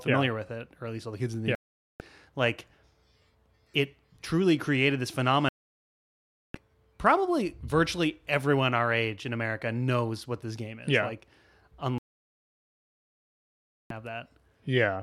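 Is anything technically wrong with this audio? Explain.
Yes, there's a digital broadcast dropout, three times. The speech mutes from 1.55 to 2.01 s right after "the kids in the", from 5.49 to 6.55 s after "it truly created this" (coming back on "probably virtually everyone our"), and from 11.98 to 13.91 s. The receiver lost the signal or got corrupt frames and muted until clean ones arrived, so about 0.45, 1.06 and 1.92 s of programme is gone, not just quiet.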